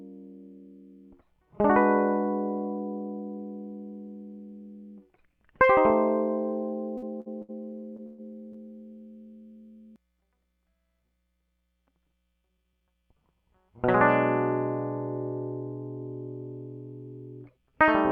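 Late packets left the jitter buffer empty, so this music holds its last sound for about 51, 54, 67, 18 and 19 ms at 6.97–7.05, 7.21–7.28, 7.42–7.51, 7.97–8.00 and 8.53–8.56 s, each a short stall from a late packet, smearing briefly before continuing intact. At 8.06–8.21 s a call audio freeze, likely from packets held up in transit, stretches the sound into a fading buzz or hiss for about 121 ms, never reaching silence, then resumes where it stopped.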